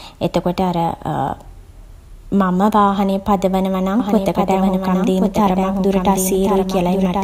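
A second copy of the speech is likely being captured through a slower path and mixed back in, producing a doubled audio track from 4.00 s to the end. The copy trails by roughly a second, about 5 dB quieter, cuts in abruptly and carries no decay or room colour.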